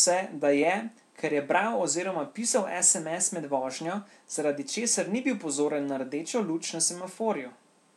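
Resampler restarted on every block, from 1.34 s after "da je ker" to the end: converting 48 kHz to 44.1 kHz in isolated 20 ms blocks leaves an error at each block edge, heard as a 50 Hz buzz riding on the speech.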